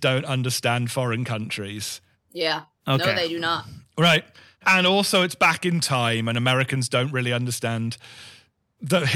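Hard clipping runs through the whole speech clip. The signal was driven about 6 dB beyond what the converter or processing stage could pass, so the loudest peaks were sliced flat. Only a small fraction of samples, well under one percent, hit that ceiling, so the damage comes as brief crackle and grit on peaks, not a constant fuzz. Unlike soft saturation's rounded warmth, these flat tops spray harsh high harmonics.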